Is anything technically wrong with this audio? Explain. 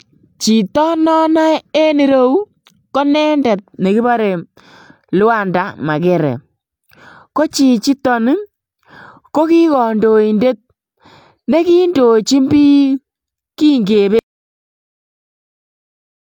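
Yes. An audio dropout to silence runs from 14.19 s to the end of the clip. The speech cuts off abruptly and gives way to silence with no room tone, likely because the input was lost while the recorder kept writing silence.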